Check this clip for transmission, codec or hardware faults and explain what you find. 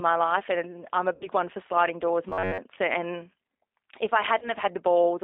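Three kinds of fault are audible: codec coding throughout, two concealed packet-loss gaps, and one stretch of robotic buzz.

G.729 codec, throughout: the speech is rebuilt at 8 kbit/s from a filter and a few pulses, band-limited to roughly 300 Hz to 3.7 kHz, plainly rough and synthetic.

VoIP packet loss concealed by the speech codec, 1.15 to 1.28 s and 4.39 to 4.52 s: the decoder bridges missing audio (about 60 ms, then 30 ms) by extrapolating, leaving a stretched sound that fades.

Robotic sound from repeated short buffers, 2.29 to 2.59 s: a rigid metallic buzz at 93.8 Hz, likely from repeating a roughly 10.7 ms buffer over most of that span.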